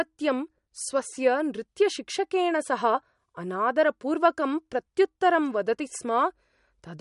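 Throughout the speech, nothing reaches above 11.2 kHz, and the sound turns watery and swirly. This is likely MP3 compression at a low bitrate, near 48 kbps. Short of bits, the encoder cut the treble and dropped weak detail from frame to frame.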